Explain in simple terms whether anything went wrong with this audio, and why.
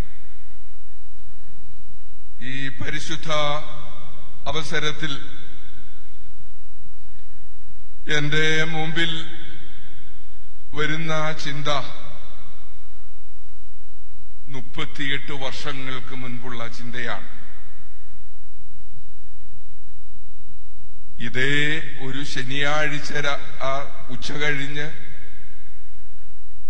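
Damaged data in a compressed stream causes brief glitches at 1.26 s, 4.46–4.51 s and 24.01 s, where corrupted bytes make the decoder lose its place and resynchronise.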